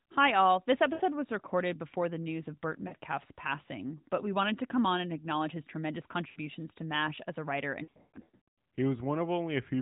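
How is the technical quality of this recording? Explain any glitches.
The glitches are lost AMR speech frames, heard over a narrowband mobile-style channel whose light, band-limited sound fits AMR-NB at around 12.2 kbps. The dropouts come at 0.94–1.02 s (60 ms), 2.88–2.94 s (40 ms), 6.30–6.39 s (60 ms), and a scattered stretch from 7.84 to 8.48 s with about 540 ms lost and the longest run 120 ms. Corrupted frames were discarded, so the decoder stretched the last good pitch and vocal-tract settings with fading gain. You get brief warbly dips, and near 8 s a smeared, fading stutter.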